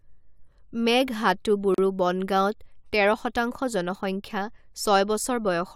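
A gap between stream segments opens from 1.74 to 1.78 s: the time stamps of two adjoining segments, about 2 s long, leave roughly 38 ms unaccounted for, so the player inserts silence. The speech drops out abruptly with hard edges, then resumes intact.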